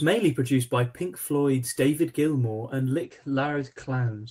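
A call bitrate drop starts at 3.04 s and runs to the end. The encoder was starved of bits, consistent with a fall from 32 to 13 kbps, so coding turns coarse and content above 8 kHz vanishes, leaving rough, muffled sound for the last 1.27 s.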